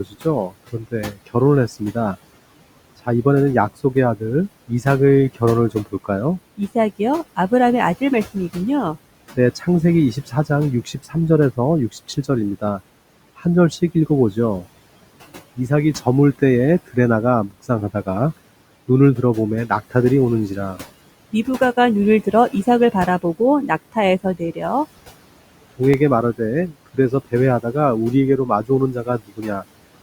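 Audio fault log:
Throughout: noise suppressor artifacts. The suppressor pulls down every band it judges to be steady background by about 18 dB, frame by frame, so the room noise sinks in pauses and swells back under the speech.
0.04–2.16 s, 3.94–12.8 s, 13.37–14.65 s, 15.56–19.95 s, 22.25–24.63 s, 25.78–29.65 s: speech cut by the noise suppressor. Quiet consonants and word endings were mistaken for noise and dropped with it, by up to about 19 dB, roughly a second in the 3.94–12.8 s and 25.78–29.65 s runs, so they sound swallowed.
25.94 s: block of digital silence. A gap under a millisecond long, which fits a 32-sample block of zeros left when the output buffer went unfilled, drops the signal to nothing and back without a fade, heard as a single tick.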